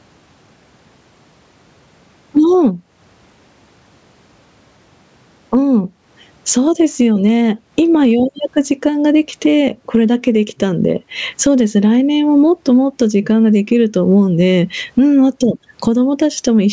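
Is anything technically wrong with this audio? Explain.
Yes. Two faults run through the whole speech recording.

Sample clock jitter is present from start to finish. The converter clock wanders by around 2 microseconds, so steep, fast-changing parts of the waveform are sampled at the wrong moment. The result is a fine hiss or roughness roughly 45 dB below the speech that grows on loud and bright syllables and disappears in pauses.

Gain pumping is audible throughout. The gain swings by around 15 dB, and loud and soft passages sit squashed close together. The likely cause is input gain set far too high, with a fast limiter clamping down on every peak.

The call microphone processing, with nothing above 8 kHz, is working normally and is not a fault.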